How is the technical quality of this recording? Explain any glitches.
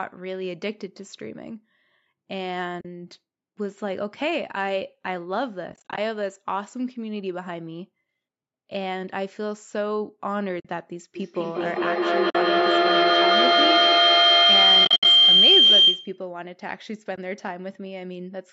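The speech has two kinds of fault: repeated short muted gaps from lost AAC frames, and a loud feedback howl through the middle of the clip.

AAC frame loss with muting occurs at 2.81–2.85 s, 5.70–5.98 s, 10.60–10.65 s, 12.30–12.35 s, 14.85–15.05 s and 17.16–17.18 s. Lost frames decode as silence, so overlapping windows fade the sound into soft holes of 20 to 70 ms, broken up into short gaps around 5.7 s and 14.9 s.

Feedback howl runs from 11.15 to 16.23 s. A looping microphone-to-loudspeaker path gains level each trip, building a whistle near 3 kHz that peaks about 12 dB above the speech and pulses roughly every 200 ms.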